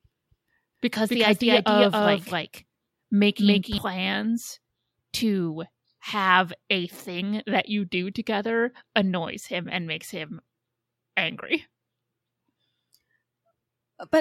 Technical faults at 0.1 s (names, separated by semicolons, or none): doubled audio track